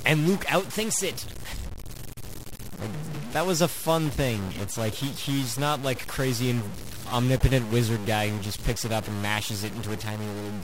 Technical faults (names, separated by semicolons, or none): stuck bit